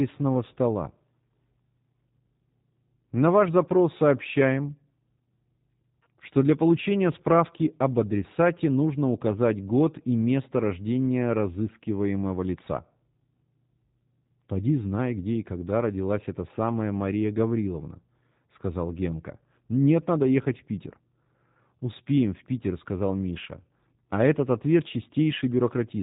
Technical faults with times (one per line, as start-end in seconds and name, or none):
0.00-26.02 G.729 codec